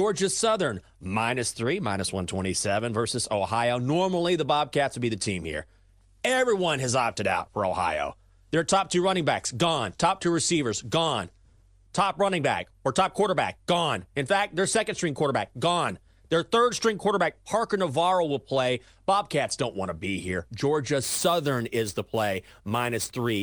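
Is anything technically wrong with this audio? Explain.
Yes. From 21.03 s to the end at 23.43 s, the speech takes on a gritty, inharmonic fizz that tracks its louder and brighter moments, strong enough to sit only around 15 dB below the speech. This is crude rate conversion: samples were repeated by nearest-neighbour picking with no filtering, which fits a change from 32 kHz to 44.1 kHz. The uneven repeat pattern leaves an error that forms shifted, inharmonic copies of the speech.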